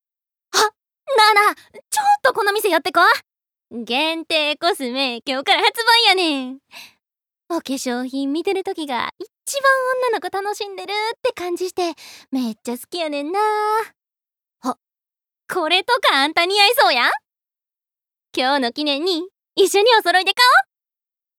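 No technical faults can be heard anywhere in the audio.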